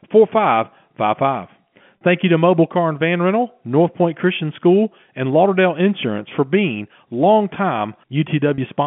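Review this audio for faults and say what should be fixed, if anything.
Packet loss with pitch repetition occurred twice, at 1.98 s and 8.55 s. Each gap lasts about 30 ms, which fits a single lost packet. The receiver covered each hole by repeating the last pitch period of the speech instead of leaving silence. Because the gaps are this short, the repeated cycle never fades to nothing. It comes through as a brief held, slightly buzzy tone before normal speech resumes. The speech is carried in the narrow telephone band of the G.711 A-law coding, roughly 150 Hz to 3.4 kHz. To prevent it, give the link a jitter buffer with enough depth and add forward error correction or redundant packets so single losses can be recovered instead of concealed.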